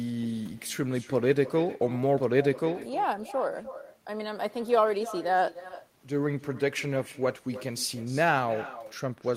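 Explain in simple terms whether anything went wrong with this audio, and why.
Yes, something went wrong: echo with no canceller, all the way through. The far end played the call on a loudspeaker, its microphone caught it, and nothing removed it, so every phrase returns about a third of a second later as a faint, thin copy. Unlike ordinary room reverberation, it's a separate delayed repeat.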